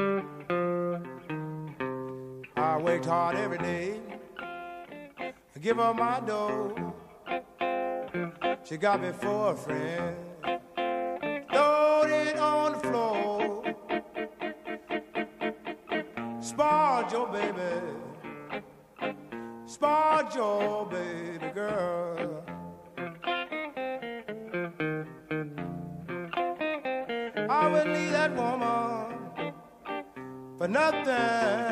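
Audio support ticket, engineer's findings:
No faults found on listening; nothing to report.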